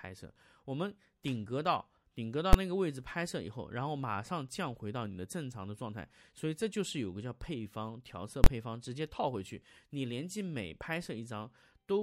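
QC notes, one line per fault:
2.53 s and 8.44–8.46 s, invalid numbers at full scale: a calculation produced infinite or invalid values that were pinned to maximum output for a whole processing block. The short 2.53 s block, fitting 512 samples, is one hard bang. The 23 ms block at 8.44 s, fitting 1024 samples, is a loud pop at each edge with silence between.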